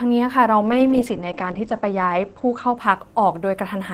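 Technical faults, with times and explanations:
0.62 s to the end, call bitrate drop: the call's bandwidth estimate falls and the encoder is pushed to spend far fewer bits. The sound suggests a fall from about 48 kbps to about 10 kbps, bottoming out for about 1.28 s. With so few bits, Opus quantises the speech coarsely, so it turns rough and watery. It also narrows the coded band from about 20 kHz to 8 kHz, which dulls and muffles the top end.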